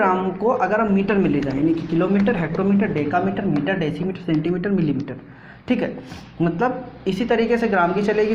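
From 0.88 to 5.33 s a call bitrate drop starves the encoder, and the sound turns coarse and muffled, which fits a fall from about 96 to 14 kbps held lowest for 1.64 s. On a spectrogram the upper band vanishes, leaving a lowered, blotchy ceiling.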